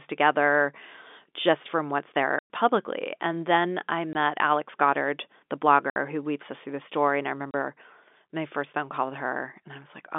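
Telephone-band speech carries packet loss filled with silence. Hard gaps open at 2.39 to 2.50 s, 4.13 to 4.15 s, 5.90 to 5.96 s and 7.51 to 7.54 s. They last 110, 20, 60 and 30 ms, which fits 10 ms packets dropping out. The receiver plays silence there, so each gap has hard edges.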